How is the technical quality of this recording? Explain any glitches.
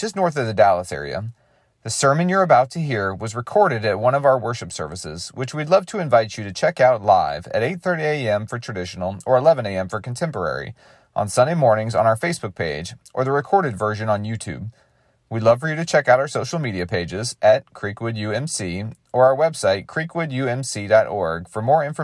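Listening through the recording, no glitches or technical problems stood out anywhere.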